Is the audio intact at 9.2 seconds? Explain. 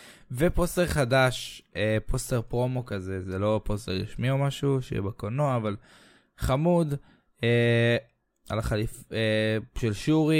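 Yes, the audio at 9.2 seconds is intact, with no dropout, glitch or other fault audible at that moment.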